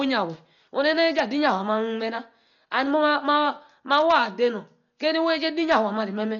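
A speech recording with heavy codec damage across its whole length, most likely from Dolby Digital compression at a very low data rate, which fits something around 40 kbps. Nothing survives above about 6.9 kHz, so the sound is dull, and the encoder has left many frequency lines empty for the decoder to fill with noise. That leaves a rough, fluttering hiss clinging to voiced tones, which a simple low-pass filter would not add.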